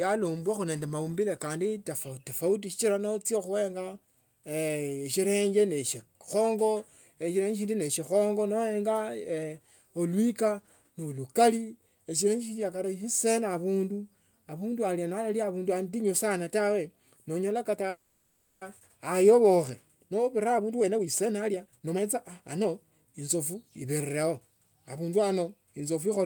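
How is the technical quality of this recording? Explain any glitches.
The speech recording has two network-related glitches just over a second apart.

From 17.89 to 18.63 s, just after "atinyu sana tawe noonyole", there is a call audio freeze. The last sound is stretched into a fading buzz or hiss for about 0.72 s, likely because delayed packets left the jitter buffer empty. Unlike a dropout, speech resumes exactly where it stopped, with nothing lost.

From 19.95 to 24.17 s, a jitter buffer speed-up plays the speech at about 117% speed. Because the buffer held more audio than it aims for, the receiver trims tiny pitch-period slices, roughly 0.7 s in total, to catch up. Unlike a pitch shift, delivery sounds hurried while the pitch stays unchanged.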